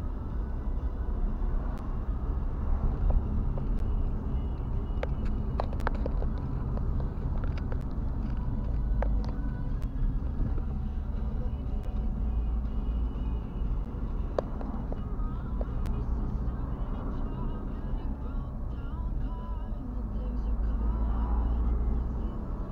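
There's a gap at a join of encoded pieces roughly every 2 s, at 1.78, 3.79, 5.80, 7.81, 9.82, 11.84, 13.85 and 15.86 s. Each is a brief dropout of about 11 to 13 ms, smeared at the edges. The pieces were encoded separately and butted together without trimming each run's start-up delay and end padding.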